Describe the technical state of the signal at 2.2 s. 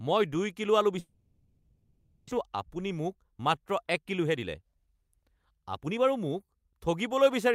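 A long network dropout runs from 0.99 to 2.33 s, so 2.2 s falls inside a stretch of concealment fill. The stream has likely stalled, leaving the receiver to extend the last sound as a fading buzz. About a second of audio never plays, and the sound resumes roughly 0.3 s late.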